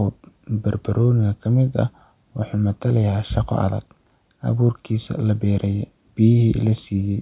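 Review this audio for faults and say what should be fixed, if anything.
No faults; nothing needs fixing.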